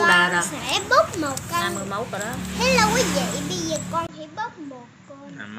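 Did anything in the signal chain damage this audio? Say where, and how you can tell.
Yes, at the capture stage. At 4.07 s there is a gap of about 20 ms, and from there to the end the audio is duller, with nothing above 7.3 kHz, roughly 5 dB quieter, and carrying a new noise floor around 35 dB below the signal. This is likely an input switched to a poorer device. A codec bandwidth drop would narrow the band without the gap, the level shift, or the different background noise.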